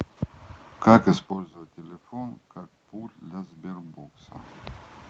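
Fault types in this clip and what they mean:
No fault types are present in this clip.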